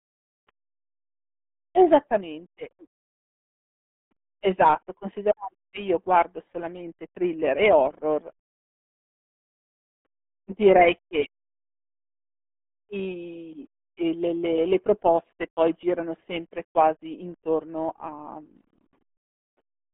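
Speech runs through the RealAudio 14.4 codec from start to finish. Nothing passes above about 3.7 kHz, and the usable band sits near 200 Hz to 3.4 kHz, like an old phone line. The voice sounds muffled and gargly, with heavy codec damage throughout. The thin, coarse quality fits a very low bitrate of around 8 kbit/s, the kind built for dial-up modems.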